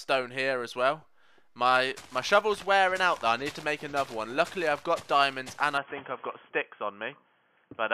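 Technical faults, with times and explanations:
5.78–7.93 s, input switched to a poorer device: with no gap, the sound turns dull and boxy, loses everything above 3.3 kHz, shifts level by a few decibels and gains a faint new background hiss. Likely the input jumped to a narrowband microphone or headset profile.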